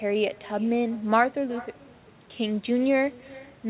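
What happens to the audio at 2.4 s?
Echo with no canceller runs through the whole clip, including 2.4 s: the far end's loudspeaker feeds its microphone uncancelled, so the sound returns around 400 ms later, about 23 dB quieter, as a thin shadow trailing each phrase.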